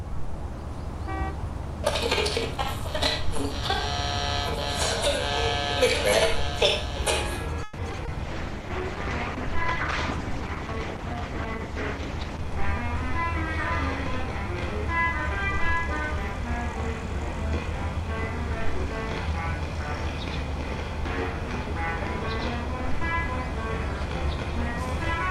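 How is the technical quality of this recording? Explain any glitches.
Rough patch in the middle of this one: three distinct transmission problems back to back, all between about 7.6 and 17.3 seconds.

From 7.63 to 8.10 s there's repeated packet loss with a robotic sound. Three gaps hit in quick succession, the longest 150 ms. The receiver papered over them by stretching the last bit of audio, so about 39% of that stretch is fill, and it comes out choppy and robotic.

Right after, from 8.23 to 12.48 s, there's a call bitrate drop. The bandwidth estimate collapsed from 128 to 11 kbps and stayed at the bottom for about 4.2 s. The encoder had to code far more coarsely and shed high frequencies, so the audio turns muffled and watery until it recovers.

Then come two jitter buffer speed-ups, one from 12.44 to 12.95 s and one from 14.27 to 17.34 s. The buffer had piled up too much audio, so the receiver snipped out tiny pitch-period chunks, roughly 40 ms in total each time. 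The first runs noticeably hurried at 106% speed. The second is only 101%, so it's barely perceptible, with pitch unchanged in both.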